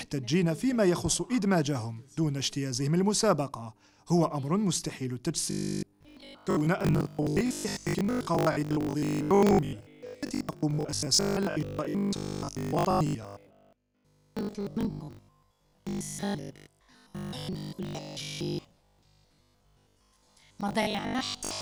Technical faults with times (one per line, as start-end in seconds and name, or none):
5.51-21.61 robotic sound from repeated short buffers